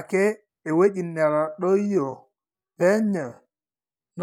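From 1.23 s to the end, the speech slows abruptly while its pitch stays the same. This is a time-stretched section, running at about 0.66 times the original pace. The likely cause is software lengthening this part to fill a set duration. It held the pitch by repeating short slices of audio. The result sounds drawn out and dragging.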